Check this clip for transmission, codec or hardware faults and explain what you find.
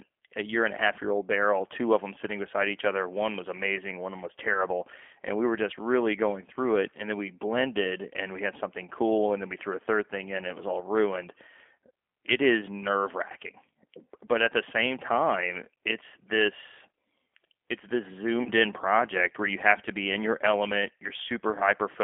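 Two faults are present: coarse low-bitrate codec coding across the whole speech clip, and two brief packet-loss gaps that the decoder papers over.

G.729 codec, throughout: the speech sounds slightly rough and synthetic, confined to a telephone band of roughly 300 Hz to 3.4 kHz with no airy top end. At 8 kbit/s, the G.729A coder discards the waveform itself and sends only a vocal-tract filter, a pitch lag and a handful of pulses per frame. The decoder rebuilds speech from those, so the fine detail and natural texture are lost.

VoIP packet loss concealed by the speech codec, at 4.53 to 4.65 s and 18.43 to 18.50 s: after "was amazing one was", and again after "it's this" and before "in project where you", the speech briefly smears into a stretched, artificial sound that sags in level, then recovers. Audio was missing for 20 ms and 30 ms, which fits two and three 10 ms frames. The decoder filled each gap by repeating its last pitch and filter with falling gain. 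Because each frame builds on the previous one, the speech stays weak or distorted until the decoder's state catches up.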